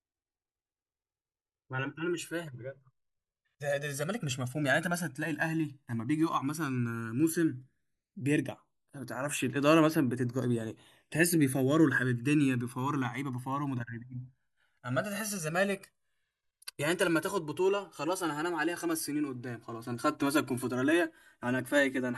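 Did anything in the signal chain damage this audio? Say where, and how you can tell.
Yes. Throughout the speech there is a slow, sweeping flange when the channels are summed to mono. This points to the converter stage: the two channels were captured on separate clocks a few hundred ppm apart, so the channels drift apart, reaching a few milliseconds by the end and dragging comb notches through the spectrum.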